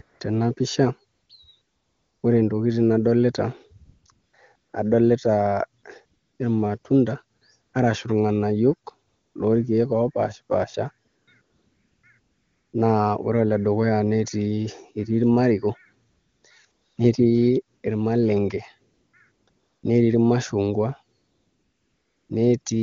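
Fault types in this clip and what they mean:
AMR comfort noise: Whenever the talker pauses, the phone stops sending speech frames and the far end fills the gap with synthetic hiss built from a rough sketch of the background's level and spectrum. That happens about two dozen times across the clip, from the very start to about 22.65 s. Some dropouts last barely 20 ms, and the longest runs about 1.1 s from 21.19 s. The real room tone keeps flipping to a smooth, even noise, and the wideband speech itself sounds clean.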